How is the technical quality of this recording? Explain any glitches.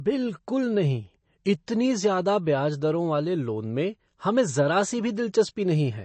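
The recording has clearly audible low-bitrate coding damage throughout the speech, with no other faults. MP3 compression, likely the cause, leaves nothing above 8.3 kHz. The dull, band-limited top, watery swirl and smeared consonants fit a bitrate around 32 kbps, where the encoder discards the treble and switches weak frequency lines on and off frame to frame.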